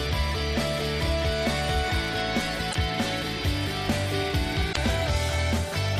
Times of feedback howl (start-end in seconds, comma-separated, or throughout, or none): none